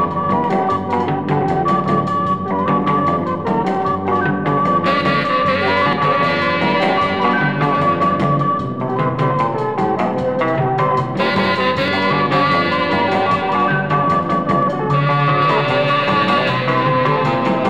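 Audio missing between chunks at 5.93 s and 11.88 s: the sound jumps forward abruptly, each skip dropping about 50 ms. The six-second spacing likely reflects chunked recording, where a short piece is lost at each handover and the two sides meet with no gap.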